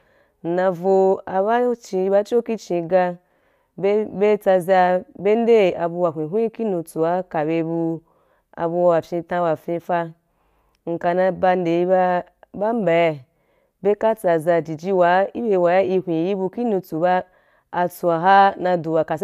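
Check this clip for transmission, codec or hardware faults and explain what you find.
No faults can be heard anywhere in the recording. There is nothing to flag at any point in the speech.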